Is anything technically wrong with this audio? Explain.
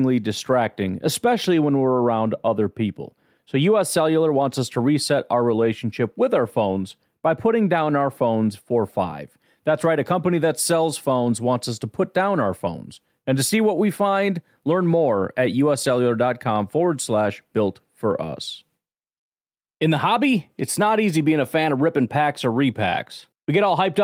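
No, nothing is technically wrong with this audio.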